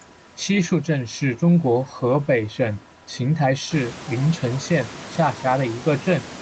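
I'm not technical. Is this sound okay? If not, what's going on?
Yes, nothing stood out as a problem when listening to this recording.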